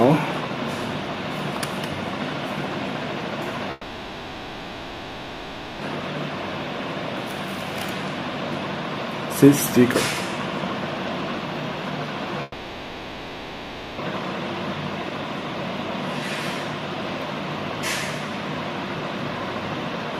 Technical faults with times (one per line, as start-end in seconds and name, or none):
3.71-5.82 long network dropout
12.42-14.01 long network dropout